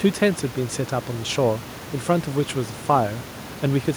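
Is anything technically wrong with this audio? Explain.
No, nothing is technically wrong with this audio.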